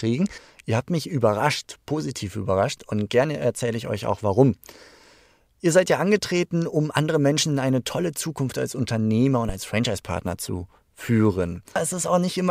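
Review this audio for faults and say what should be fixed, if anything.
A phantom power thump occurs at 9.49 to 9.56 s: a low, dull knock peaking at about -16 dBFS and dying away within roughly 14 ms. Switching the supply on a live input sends a voltage step through the coupling capacitors into the signal path. To prevent it, mute or pull down the channel before toggling phantom power, and unmute only once the supply has settled.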